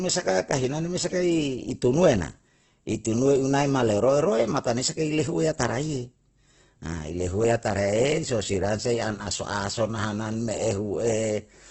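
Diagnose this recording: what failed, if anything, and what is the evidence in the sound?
The codec stage shows heavy Opus compression throughout. Speech is grainy and rough, with nothing above 8.1 kHz, which fits a wideband low rate near 12 kbps. The encoder, likely in its music mode, is filling starved bands with noise or folded content.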